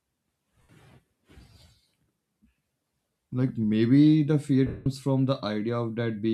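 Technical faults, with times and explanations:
0.62–0.69 s and 4.67–4.86 s (after "maybe the fear"), lost LE Audio frames: 70 and 190 ms gaps concealed by the LC3 decoder, which reused the last spectrum with random signs. The speech becomes a noisy smear rather than a hard silence or stutter, and the longer gap fades away.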